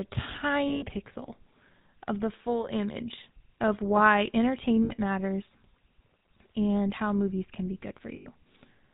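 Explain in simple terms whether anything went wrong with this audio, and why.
Yes, two things went wrong. The whole recording went through the GSM full-rate codec, the old mobile-phone voice codec. It rebuilds speech from a simple model driven by regular pulses and drops everything above 4 kHz, so the voice sounds buzzy, gravelly and muffled throughout.

There are also lost GSM frames at 0.68–0.84 s, 4.84–4.93 s and 8.16–8.27 s, about 140, 60 and 100 ms long. Each time, the decoder repeated the last good frame, so the sound hangs briefly with a rough metallic ring.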